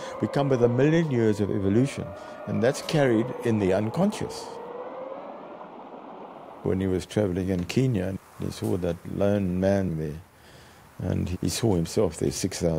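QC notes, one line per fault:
No faults heard at any point, with no dropouts, clicks, distortion or level problems to log.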